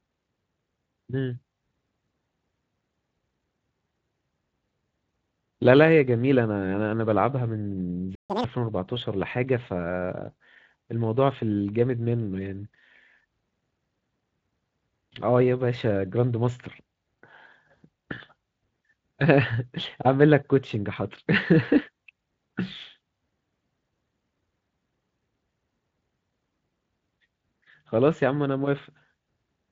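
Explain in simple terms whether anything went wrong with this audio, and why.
Yes, two things go wrong, one right after the other, around 8 seconds in.

The first is a playback stall. From 8.15 to 8.30 s the speech stops mid-flow and there is about 145 ms of silence. The likely cause is that the player briefly ran short of data or was held up. It differs from an ordinary dropout, where a piece of audio is simply lost, because the player is left holding a backlog, and what follows shows it.

The second is catch-up at higher speed. From 8.30 to 8.44 s the player works through that backlog at double speed, so the speech sounds hurried and squeaky, roughly ten semitones higher, like a chipmunk. Then it snaps back to normal. A wrong playback speed setting would raise the pitch for the whole clip. This one lasts only for this short moment right after the silence.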